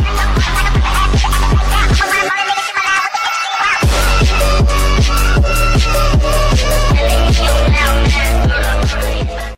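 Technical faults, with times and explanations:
2.84–2.86 s, corrupt frame decoded: a brief blip of energy at the wrong frequencies, peaking near -10 dBFS and lasting about one compressed frame. Flipped bits were decoded as valid data, so wrong sound replaces the frame, unlike a dropout or concealed frame.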